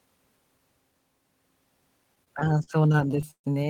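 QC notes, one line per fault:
2.15–3.47 s, repeated stalls (stutter): the speech drags and hiccups through fifteen brief holds, the longest 133 ms, filling about a quarter of that stretch with the last sound held and faded. Late packets kept emptying the jitter buffer, and nothing is lost.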